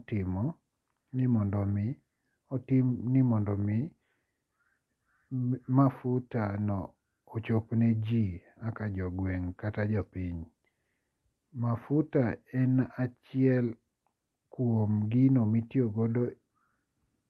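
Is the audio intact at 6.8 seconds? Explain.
Yes, the speech at 6.8 seconds is intact, carried through the WebRTC call path with no dropout, glitch or other fault at that moment.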